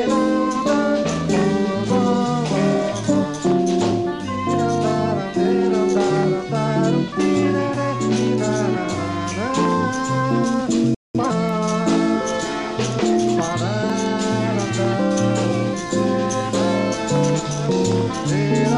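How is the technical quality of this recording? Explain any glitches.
The recording has three kinds of glitch: short regular skips, one playback stall, and a brief hurried stretch after it.

Audio missing between chunks occurs at 3.91, 8.90 and 13.90 s, exactly 5 s apart. The likely cause is a chunked recorder dropping a few milliseconds at each handover. The two sides butt together with no gap, heard as a tiny skip and seen on a waveform as an abrupt splice.

A playback stall runs from 10.94 to 11.15 s, about 0.2 s of silence. The player likely starved of data or was blocked. The sound halts mid-flow, and a spectrogram shows a blank vertical band where the waveform drops flat.

Time-compressed catch-up follows from 11.15 to 11.35 s at 2× speed. The player trims its backlog by cutting and cross-fading small pieces. The sound is rushed at normal pitch, and spectrogram events appear squeezed closer together.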